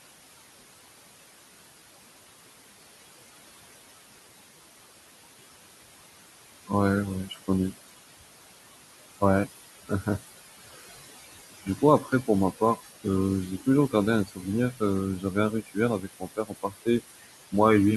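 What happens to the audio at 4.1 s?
At 4.1 s, as throughout the clip, noise suppressor artifacts pull the room noise down by about 19 dB between phrases and let it back under speech. A spectrogram shows the noise floor gating on and off frame by frame.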